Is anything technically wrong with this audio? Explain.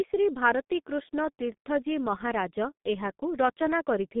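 Yes. Throughout the speech, G.723.1 codec damage is heavy. Nothing above 3.7 kHz survives, so speech sounds muffled. Coarse 30 ms frames and a slowly updated voice model, consistent with roughly 6 kbit/s, leave it hoarse and blur consonants.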